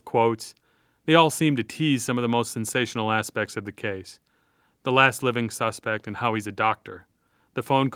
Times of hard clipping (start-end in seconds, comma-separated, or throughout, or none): none